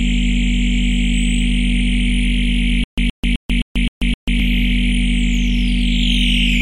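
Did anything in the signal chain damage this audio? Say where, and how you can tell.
Yes. Between 2.84 and 4.40 s there is a stutter with silent gaps. A burst of about 122 ms plays, then 138 ms of digital silence follows. The same burst returns six times at a steady 260 ms period. The even spacing and the identical fragment point to the playback stage. The likely cause is a stalled player or stream that replayed its last buffered fragment at each retry and then ran dry. The audio due in that span never arrives.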